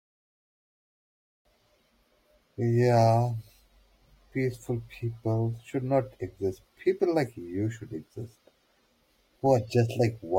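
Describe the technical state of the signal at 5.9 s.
At 5.9 s the signal is intact, with no audible technical fault in the speech at that moment.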